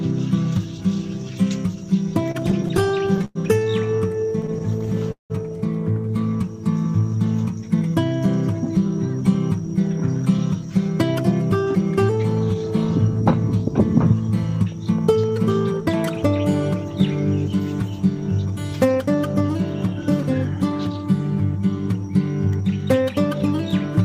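From 2.31 to 3.37 s and again from 3.97 to 5.32 s the audio shows repeated stalls (stutter). The jitter buffer keeps running dry, 14 and then 12 times. Each gap is bridged by stretching the last sound, up to 103 ms and 181 ms, so nothing is lost, but the flow drags and hiccups.

A jitter buffer speed-up follows from 7.69 to 12.55 s. The receiver trims short pitch-period slices to shed surplus delay, about a fifth of a second in total, so the audio runs roughly 5% fast at unchanged pitch and feels hurried. A milder pass at 4%, removing roughly 70 ms, occurs from 19.42 to 21.02 s.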